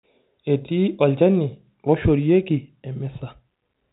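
The clip is speech, and nothing is technically wrong with it.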